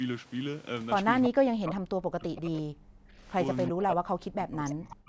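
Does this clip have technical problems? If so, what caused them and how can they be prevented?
Yes. From 1.27 to 3.25 s and again from 3.7 to 5.08 s, the speech dips sharply, at worst by about 40 dB, over roughly two seconds and then about one and a half seconds. This is speech suppressed in double talk, likely caused by both ends talking at once. The echo canceller could not tell the near talker from loudspeaker echo, so it attenuated everything. Tuning the canceller's double-talk detector, or using a headset so there is less echo to cancel, prevents this.

Between 3.65 and 3.7 s, a brief, faint copy of earlier sound surfaces about 20 dB below the speech, trailing it by 333 ms. This is an echo leak, likely from a loudspeaker on one side whose echo canceller left a residue of its microphone pickup and sent it back. The band limit at 8 kHz from the call's microphone processing also applies to that scrap. 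Lowering loudspeaker volume, moving the microphone away from it, or switching to a headset prevents this.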